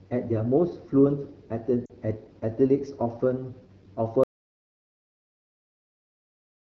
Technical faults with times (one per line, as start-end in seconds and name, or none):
0.00-6.67 AMR wideband (HD Voice) codec
1.86-1.93 lost AMR speech frames
4.23-6.67 audio dropout to silence